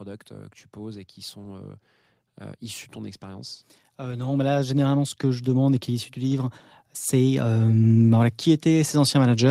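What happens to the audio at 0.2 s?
Nothing goes wrong at 0.2 s: the speech is intact there, with no dropout, click, distortion or other fault.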